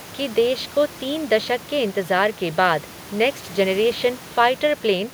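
No technical faults can be heard anywhere in this speech clip. The room noise sits about 23 dB below the speech, a part of the recording itself rather than anything the system has added.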